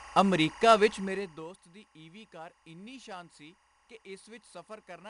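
Timecode bleed runs through the whole speech clip: linear timecode from a neighbouring track or cable has leaked into the audio. The code is a square wave that flips between two pitches around 1 and 2 kHz, and its pattern repeats at the 23.976 frames per second of film-rate timecode. It sits roughly 20 dB below the speech and comes through as a steady chirping warble underneath it that never stops.

4-bit ADPCM compression is also present from start to finish, and its damage is plainly audible. Each sample is coded as a 4-bit step away from a predicted value, with the step size adapting as the signal moves. The coding error becomes a gritty hiss that rises with the level of the speech, and sharp onsets distort where the step cannot grow fast enough. Nothing remains above 10.7 kHz, and the sound points to a stream near 89 kbps.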